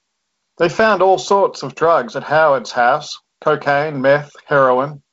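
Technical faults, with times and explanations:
No technical faults; the speech carries the light coding character of G.722 wideband telephone coding at 48 kbit/s, with nothing above about 7.8 kHz.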